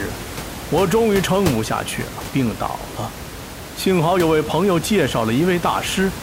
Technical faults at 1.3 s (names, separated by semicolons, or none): none